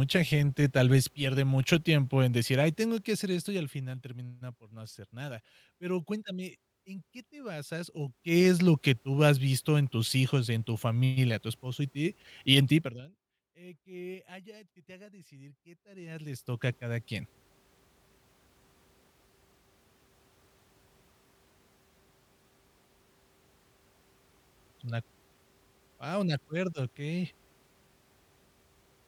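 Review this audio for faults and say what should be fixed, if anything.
Zipper noise rides on the speech at 8.03–8.50 s, 12.77–13.10 s and 15.79–16.72 s. The level rises about 15 dB, falls about 25 dB, then rises about 25 dB. Each move is made in unsmoothed steps, 1 dB each (4 dB in the fall), at roughly twenty a second, and every jump clicks. Here the ticking comes at a regular rate that matches the gain steps, rather than as scattered isolated clicks. Interpolate the gain per sample so changes ramp smoothly instead of stepping.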